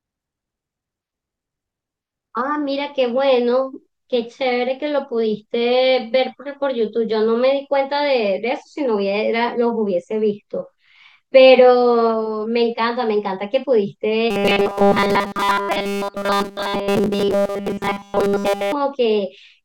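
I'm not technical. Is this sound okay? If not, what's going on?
No. From 14.31 to 18.72 s the voice turns into a stiff, metallic buzz at a fixed pitch of about 200 Hz. That is robotic sound from repeated short buffers. New audio is most likely arriving too slowly, so the software keeps replaying the last tiny slice, about 5 ms long, and nearly all of the real speech in that stretch is skipped. Unlike a plain dropout or stutter, the sound never goes silent or jumps. It keeps roughly following the speech but loses its natural tone.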